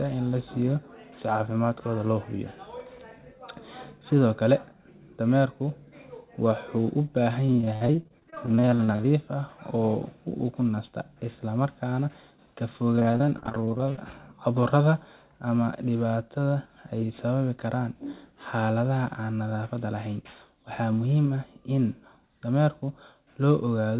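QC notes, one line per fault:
7.47–9.05 s and 12.96–13.98 s, repeated packet loss (robotic sound): dense runs of brief dropouts, each patched by stretching the preceding sound, leave a choppy sound with chunks missing. The spectrogram shows smeared, repeated frames below the 4 kHz ceiling of the G.711 call path. The waveform shows jagged, uneven envelopes.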